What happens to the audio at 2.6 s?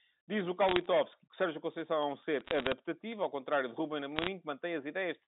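Bit errors on a digital phone line crackle from 2.41 to 2.72 s: flipped bits in the G.711 stream corrupt single samples, hits on high bits or on the sign of loud samples giving sharp ticks, roughly 0.4 percent of bits.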